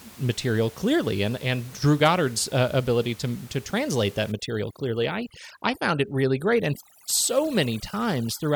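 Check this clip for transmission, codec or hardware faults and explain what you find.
One fault appears. From 4.32 s to the end at 8.56 s there is overdone noise removal: an over-aggressive suppressor shuts off bands near its noise estimate, including quiet speech. The room noise, about 23 dB below the speech, gives way to near silence with twinkling specks. Unlike low-bitrate codec smearing, the artefacts come from the silenced background.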